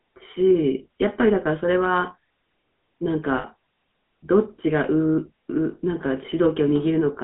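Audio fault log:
Throughout: GSM full-rate codec. The speech has a buzzy, gravelly roughness that is plainly audible, with nothing above 3.5 kHz and little below 200 Hz, giving a thin telephone-band sound. This fits the 13 kbps GSM full-rate coder, which rebuilds speech from a vocal-tract model driven by regularly spaced pulses. Because only a sparse excitation is kept, fine detail in the voice is replaced by a coarse, grainy texture.
3.38 to 3.45 s: lost GSM frames. For about 60 ms the sound freezes into a rough, metallic ring instead of continuing. This points to about three consecutive bad frames, each filled in by repeating the parameters of the last good frame. The gap is short, so the held sound is not cut to silence before good frames resume and normal decoding picks up again.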